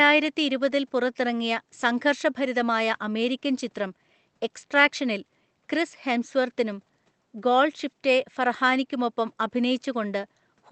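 Nothing goes wrong anywhere in this speech recording; there's just a faint room hush sitting about 45 dB below the talking, and the call codec trims everything above 8 kHz the way it's set up to.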